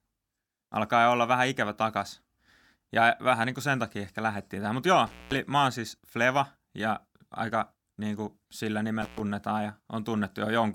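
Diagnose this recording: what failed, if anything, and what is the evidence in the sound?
Analogue wiring, intermittent contact: a loose connection briefly opens, cutting out speech with crackle at 5.06–5.37 s before "mä oon siis" and 9.02–9.20 s after "aika niin kuin sillä".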